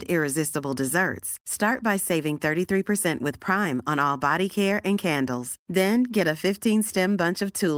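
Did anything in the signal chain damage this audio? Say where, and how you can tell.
No, nothing along the signal chain audibly damaged this speech recording, and the signal holds steady and intact throughout.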